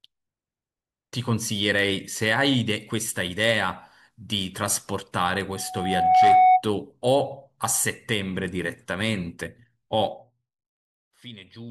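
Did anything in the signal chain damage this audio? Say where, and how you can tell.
Yes. Loudspeaker feedback squeal, 5.54 to 6.64 s, at the analogue front end: a 743 Hz tone swells over roughly 0.7 s to about 10 dB above the speech. The microphone was picking up its own loudspeaker, and at that frequency the loop gain exceeded one.

Zipper noise, 10.00 to 10.51 s, in the gain stage of the driver or call processing: a level drop of roughly 15 dB is heard as a fast ticking, around 70 steps per second. The gain was updated in unsmoothed jumps, likely once per buffer, and each jump clicks.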